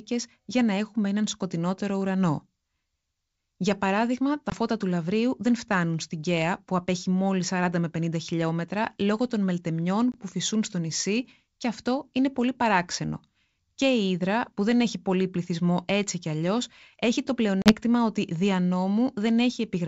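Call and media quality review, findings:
Packet loss on an ADPCM call, three events. Lost packets filled with silence, so the receiving ADPCM decoder's predictor and step size drift from the sender's until they re-converge.

4.50–4.53 s: about one packet (20 ms) dropped between "παράδειγμα τα" and "φώτα του". Hard-edged gap, then slightly distorted speech as the decoder state recovers.

10.12–10.19 s: about one packet (20 ms) lost just before "φυσούν στο νησί και". Abrupt hole, with distorted onset settling within tens of milliseconds.

17.62–17.76 s: about two packets (40 ms) lost between "κι αλλιώ έχει το" and "ότι δια". The longest dropout, with a mistracking decoder causing a short distorted stretch on resumption.

The surrounding G.722 wideband coding is clear up to about 7 kHz, with faint or no upper-band hiss, which fits the full-rate 64 kbit/s mode.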